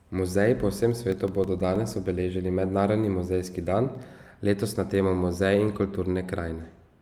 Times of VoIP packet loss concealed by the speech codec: none

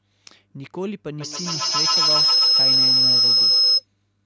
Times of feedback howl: 1.20-3.87

